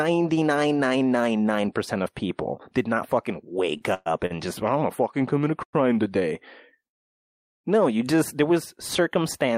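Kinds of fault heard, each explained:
Short stall from a late packet: A packet arrived late, the jitter buffer ran dry, and the receiver stretched the last sound to cover the wait, then resumed where it left off, so nothing is lost. It happens twice: a 27 ms hold at 3.77 s just after "people did not fucking", and a 45 ms hold at 4.26 s just before "just oh I am". On a spectrogram each shows as briefly smeared, frozen harmonics. In the waveform a repeated cycle pattern runs slightly long.
Call audio freeze: The audio stops moving forward and the last sound is carried on as a fading buzz, most likely because packets were held up in transit and the jitter buffer emptied. Playback then resumes from the same point, adding delay without losing content. At 3.94 s there is a 117 ms fill with no silence. After "commit a" at 5.63 s, about 80 ms of a 100 ms fill is silent. At 6.87 to 7.66 s, 760 ms of a 769 ms fill is silent. 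Spectrograms show a smeared tail collapsing into a blank band, and waveforms show a flat run.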